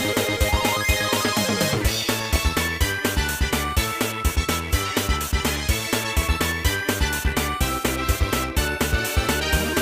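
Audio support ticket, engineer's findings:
DAB burbling, 0.35 to 0.70 s: burbling over the programme. Weak-reception bit errors slipping past error correction into MP2 data; corrupted samples blip individual sub-bands, corrupted scale factors jump them in level for up to a frame. Fits a bit error rate around a tenth of a percent.

DAB burbling, 2.24 to 2.40 s: shorter, denser burst of the same burbling. Points to a higher error rate, a few tenths of a percent, hitting a short run of consecutive frames.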